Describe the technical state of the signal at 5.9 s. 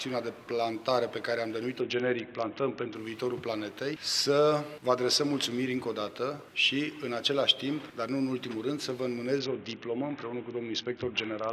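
Around 5.9 s the signal is intact, with no dropout, distortion, glitch or other technical fault to be heard at that point.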